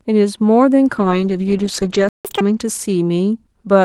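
From 0.97 s until about 3.77 s the speech turns rougher and duller, losing its top end. This is a call bitrate drop: the Opus encoder was pushed from about 40 kbps toward 13 kbps, narrowing the audio band from 12 kHz to 8 kHz and holding the lowest rate for about 1.2 s.

At 2.09 s the speech cuts out into silence for about 160 ms, until 2.25 s. This is a playback stall, most likely the player running dry of buffered data or its output thread being blocked, so nothing reached the speaker until it recovered.

From 2.25 s to 2.41 s the speech rushes forward at double speed, pitched up by roughly ten semitones, before settling back. This is catch-up at higher speed: the player resampled its backlog to win back the time lost in the stall.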